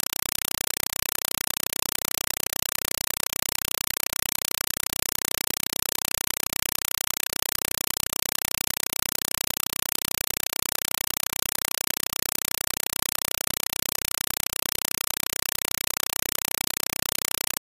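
Throughout the clip, a compressed stream played as audio replaces the speech: an AC-3 bitstream reached the output as if it were ordinary samples and was never decoded. Each coded frame comes out as a 4.0 ms burst of dense noise followed by silence, repeating 31.25 times a second. The result is very loud, harsh chattering static with a steady buzzing rhythm, and none of the speech can be heard. The density of the bursts fits a stream of about 192 kbps.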